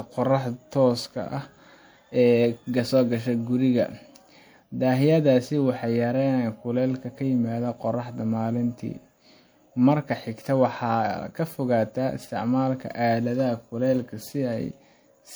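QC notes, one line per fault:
throughout, generation loss: the speech swirls and sounds hollow, with blurred consonant attacks, beyond what one MP3 pass at 96 kbit/s leaves. The likely cause is about three encodes, each quantising on a shifted frame grid so noise and spectral gaps accumulate.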